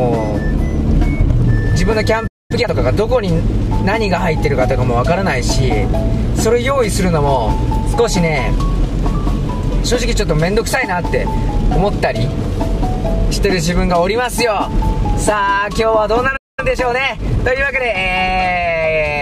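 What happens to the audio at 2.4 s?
A playback stall silences the sound from 2.27 to 2.51 s, a 224 ms gap before output resumes. The player likely ran out of data.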